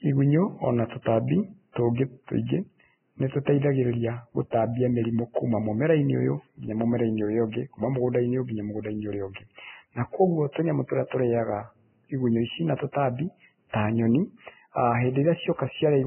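Throughout, the speech is band-limited to about 3.1 kHz, with hissy, grainy treble that fits heavy, likely Vorbis compression at roughly 10 kbps. Coarsely quantised detail turns into noise, unlike a clean low-pass.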